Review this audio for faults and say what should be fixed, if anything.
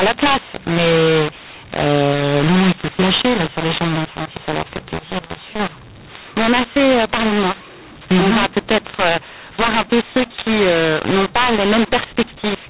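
Throughout the speech, mu-law and A-law are mixed up: A-law samples are decoded as mu-law, scrambling levels and lifting the quietest samples into harsh hiss. On the waveform, pauses never settle at zero; the spectrogram shows noise filling every gap below 4 kHz. Declaring the G.711 law explicitly at both encoder and decoder prevents this.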